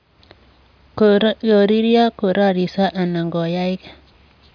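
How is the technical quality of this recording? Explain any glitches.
Nothing here catches the ear as a glitch; the speech comes through steady and unbroken the whole way.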